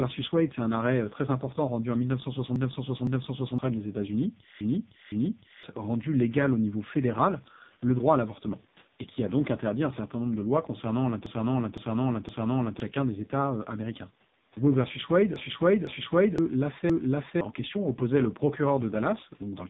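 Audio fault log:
throughout, AMR narrowband mobile codec: The speech sounds thin, buzzy and synthetic, with nothing above about 3.8 kHz, so sibilants are dulled and the voice has a boxed-in telephone quality. The damage is heavy because of the very low 5.15 kbps rate. At that rate the codec rebuilds the voice from a vocal-tract model excited by only a few pulses per 5 ms subframe, and too little detail survives for the result to sound natural.
2.56 to 3.58 s, 4.61 to 5.63 s, 11.26 to 12.80 s, 15.36 to 16.38 s, 16.90 to 17.41 s, repeated buffer: Each span holds one half-second piece of speech played back-to-back, with a hard join at each restart, heard as a stammering loop. The first, second and fourth spans repeat it twice more, the third three times more, and the last once more. New audio arrived late, so the device replayed its last buffer, about 512 ms, which fits an 8192-sample buffer. 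Up to roughly a second and a half of speech is lost each time.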